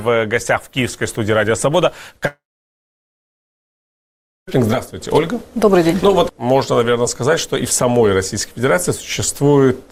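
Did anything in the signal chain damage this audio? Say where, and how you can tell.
Yes. The damage is most likely at the network stage, a long network dropout from 2.27 to 4.49 s. At 2.27 s the last sound is carried on as a buzz or hiss that fades. Then about 2.07 s of silence follows. At 4.49 s the audio resumes further along, and roughly 2.2 s of material is gone. The receiver's concealment filled the gap instead of playing real audio.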